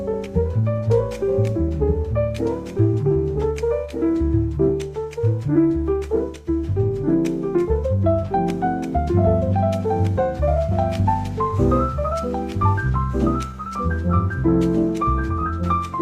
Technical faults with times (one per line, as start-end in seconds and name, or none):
0.00-16.02 doubled audio track
0.00-16.02 clock drift between sender and receiver
0.13-15.95 repeated timing corrections